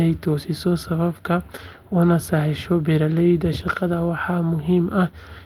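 A speech clip with one brief rough, noisier patch from 3.61 to 3.63 s, with no gap or dropout. This is a lost packet rebuilt from error correction: the 20 ms stretch fits a single packet lost and replaced by the lower-bitrate copy carried in the next one.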